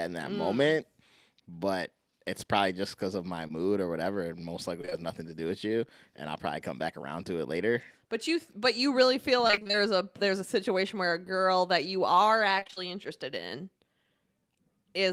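At 3.47 s, right after "just because of my", there's a short concealed packet loss: a few hundredths of a second never arrived, and the decoder bridged it by extending the last sound, so you get a quick smear before "or whatever". Three more come back to back at 4.82, 4.85 and 4.90 s, just ahead of "nothing to do with", which adds up to a longer wobble.

Between 9.47 and 9.75 s, after "but you really feel", it turns into repeated packet loss, or robotic sound. Around half that stretch is patched-in audio, and the holes come so close together that it sounds choppy, with pieces missing, leading into "a there's a situation". The same thing happens more briefly from 12.59 to 12.78 s.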